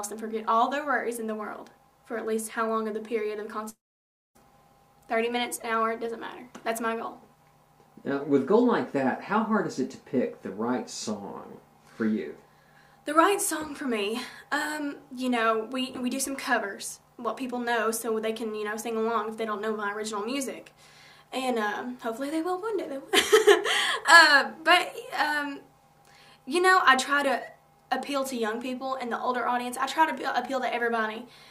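A long network dropout, likely from the stream ceasing to deliver packets, hits the audio from 3.69 to 4.37 s. About 0.66 s of sound is lost. The receiver briefly extends the last sound as a fading buzz or hiss, then roughly 0.59 s of silence follows before playback resumes, skipping the missing part.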